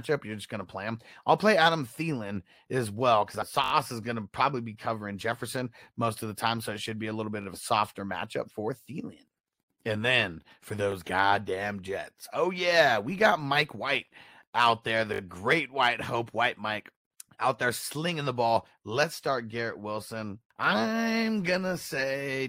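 At 3.64–3.72 s and 15.14–15.2 s, late audio causes a repeated buffer. One 20 ms slice replays four, then three extra times, giving a buzzy stutter rather than a dropout's silence.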